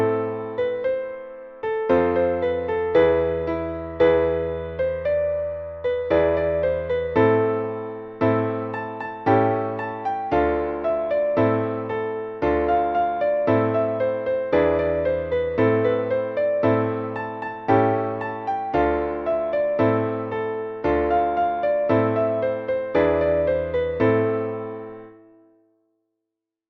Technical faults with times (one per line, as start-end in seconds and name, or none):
none